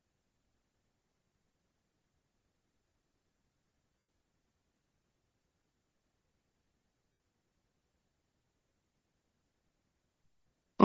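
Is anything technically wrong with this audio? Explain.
Yes. Throughout the speech there is a breathy, grainy edge and the upper frequencies sound thin and hissy. This is likely Bluetooth LC3 compression. At a low bitrate, which these artefacts fit (around 32 kbps with short 7.5 ms frames), the codec zeroes much of the upper spectrum and fills it with noise.

At 3.99 to 4.08 s (97.5 ms) and again at 7.12 to 7.20 s (75 ms), the speech turns into a brief noisy smear that fades away. These are lost LE Audio frames. The decoder kept repeating the last received spectrum with randomised signs and faded it out over the gap.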